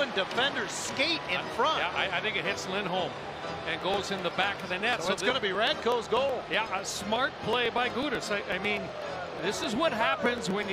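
From 3.57 s to 10.63 s a steady run of small ticks cuts through the sound, one every 0.124 s, roughly eight a second and around fifty in all, heard only where there is signal. These are periodic USB or driver dropouts: something interrupts the audio path on a fixed cycle, and each time about a millisecond of audio is skipped outright rather than filled, so the waveform jumps and clicks at every gap.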